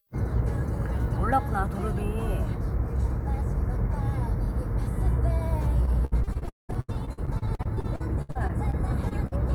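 From 5.85 to 9.33 s, repeated packet loss (robotic sound) leaves frequent holes, up to about 0.2 s, patched by extending prior sound, giving choppy audio with pieces missing.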